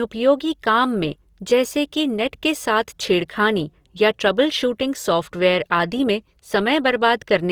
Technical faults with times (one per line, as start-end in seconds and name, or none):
0.00-7.52 Opus compression